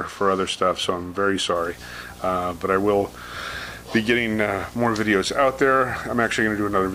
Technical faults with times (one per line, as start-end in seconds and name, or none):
1.55-6.94 video or display buzz